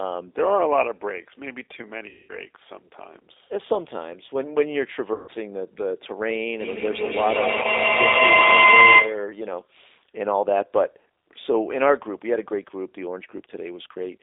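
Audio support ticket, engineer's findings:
Narrowband, slightly rough and synthetic timbre throughout; nothing below about 300 Hz or above 3.7 kHz. G.729 codec, sounding like the 8 kbit/s G.729A variant. Speech rebuilt from a vocal tract filter, pitch predictor and sparse pulses per 10 ms frame. Coding damage plainly audible across the whole clip.

Dropouts smeared into a fading buzzy tone or coloured noise at 2.09–2.33 s, 5.14–5.32 s and 7.62–7.67 s. VoIP packet loss concealed by the speech codec. Gaps of about 200 ms, 140 ms and 20 ms, fitting runs of roughly ten, seven and one 20 ms packets. Decoder stretches its last pitch and filter with falling gain. Weak, distorted sound lingers briefly after each return.

Tonal howl near 2 kHz, 6.6–9.37 s, loop delay roughly 150 ms, peaking about 10 dB above speech level. Feedback howl. Two devices in one room on the same call, forming a mic-to-speaker loop with gain above unity. 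Repeats build, narrowing to the loop's favoured frequency. The 7.62 s dropout falls inside the howl.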